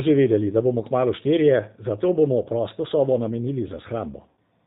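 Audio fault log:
Throughout: G.729 codec. The speech has a slightly rough, synthetic edge that is plainly audible. Nothing above 4 kHz survives, so the top end sounds dull. The coder models each stretch of sound as a vocal tract filter plus a pitch predictor. The remaining excitation is a few pulses per short frame. Fine detail between those pulses is lost, which leaves the grainy texture. The sound points to a bitrate near 8 kbit/s.
4.29 to 4.40 s: VoIP packet loss concealed by the speech codec. About 80 ms of audio went missing, which fits roughly four 20 ms packets. The decoder filled the gap by repeating its last pitch and filter settings. Each repeat came out quieter than the one before. The sound smears and fades. Each frame builds on the previous one, so the speech stays weak and distorted briefly after the gap.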